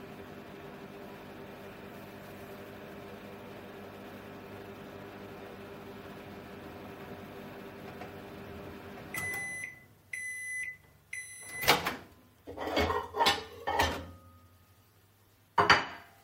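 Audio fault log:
The recording of sounds carries no audible technical fault anywhere along its length, with its level, bandwidth and continuity holding steady throughout.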